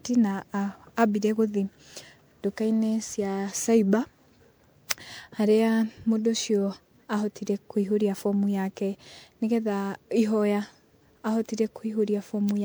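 Throughout the speech, the audio has likely been through an MP3 encoder and decoder again and again, around seven times, at a rate that fits 128 kbit/s. That is generation loss. Each new pass quantises on a shifted frame grid, so the coding noise and the gaps cut into the spectrum stack up rather than cancel. The result sounds swirly and hollow, more smeared than a single encode at that rate would be, with consonant attacks blurred and softened.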